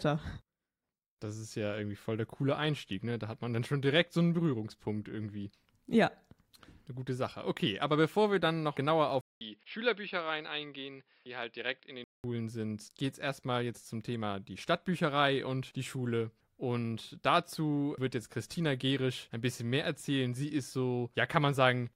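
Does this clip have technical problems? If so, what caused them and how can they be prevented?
Yes. From 9.21 to 12.24 s, after a 200 ms gap, the speech dulls, nothing above 5.3 kHz, and drops about 5 dB: likely an input switched to a poorer device. Lock the input device before recording and disable automatic device switching in the system settings.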